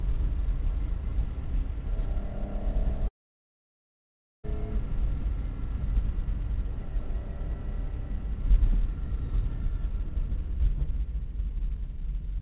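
Long network dropout, 3.08 to 4.46 s: the last sound smears into a brief fading buzz or hiss, then near-silence holds for about 1.33 s before audio resumes with roughly 1.36 s missing. The cause is likely a stalled packet stream that the receiver papered over. Nothing above 4 kHz is present, which fits G.711 mu-law.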